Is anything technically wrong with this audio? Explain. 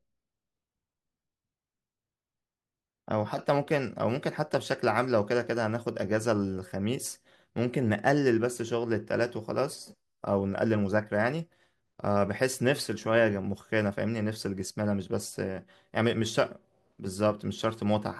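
No, there's nothing technically wrong here; it's a straightforward speech recording with no faults to point out.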